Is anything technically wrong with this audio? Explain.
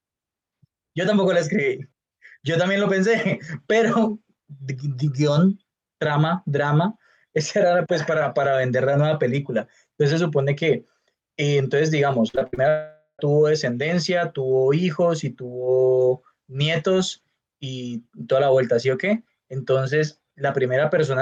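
Yes, there are two problems, back to back, a bit after the 12-second mark in this speech clip.

From 12.28 to 12.59 s there's repeated packet loss, and you get that robotic sound. Five separate gaps land inside about a third of a second, the longest around 59 ms. Each one gets patched by stretching out the sound just before it, so over half that span is filler rather than real audio. The result is choppy, with bits of speech chewed away.

Then from 12.69 to 13.21 s things get worse. For roughly half a second the real audio just isn't there. What you hear instead is the last bit of sound smeared on as a fading buzz, with a brief stretch of near-silence of around 50 ms, before the speech picks up again further along, minus the missing piece. That's most likely a long network dropout, where nothing got through for that whole stretch.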